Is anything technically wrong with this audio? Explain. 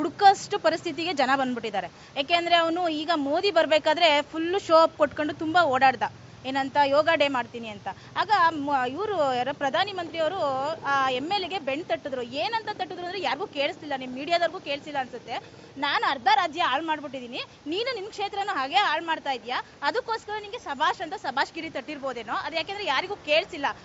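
No, no technical faults here.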